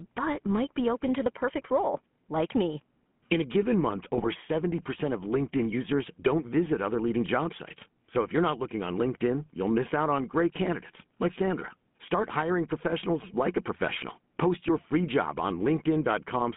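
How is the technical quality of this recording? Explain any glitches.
The recording is narrowband and coded throughout, with one short burst of corruption.

GSM full-rate codec (whole clip): The speech passes through a band of roughly 150 Hz to 3.4 kHz. It has the buzzy, gravelly texture of a vocal-tract model driven by coarsely sampled pulse excitation, consistent with 13 kbps full-rate GSM. The codec damage is plainly audible.

GSM bit errors (4.15 to 4.26 s): For about 0.12 s, which fits roughly six damaged 20 ms frames, corrupted filter, pitch and gain parameters reach the decoder. The spectrum warps and the level jumps, so the speech breaks into squawks, pops and gargling.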